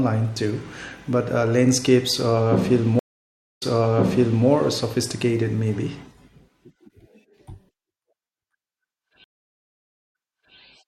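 Twice the connection dropped and the player reconnected with a fresh decoder, a stream reconnect each time. At 2.99 s the speech cuts to 0.55 s of silence, then resumes about 0.91 s earlier than where it broke off, so that stretch repeats before the fault settles at 4.46 s. At 9.24 s the gap is 0.82 s, and playback picks up 0.5 s back, ending at 10.56 s. Each return starts muted or faded in.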